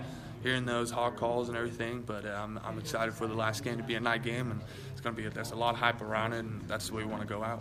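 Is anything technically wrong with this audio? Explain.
Yes. Throughout the clip, a faint buzzing chirp pulses at roughly 70 per second, sitting about 35 dB below the sound. This is computer activity noise: processor, graphics or mouse load shifts the shared ground, so the interference tracks the machine's work, not the audio.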